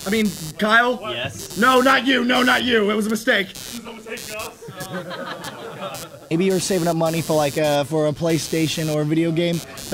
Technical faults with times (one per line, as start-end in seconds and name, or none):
0.00-9.94 computer activity noise